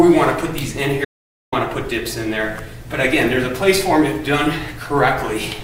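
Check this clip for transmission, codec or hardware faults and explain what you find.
There is one fault, an audio dropout to silence, from 1.05 s to 1.52 s. For about 475 ms the sound cuts out mid-flow and is replaced by complete silence, with no room tone underneath, and then resumes abruptly. The likely cause is a momentary loss of input, such as a dropped link or device, while the recorder kept writing silence. On a waveform this shows as a flat line, and on a spectrogram as a blank vertical band with sharp edges.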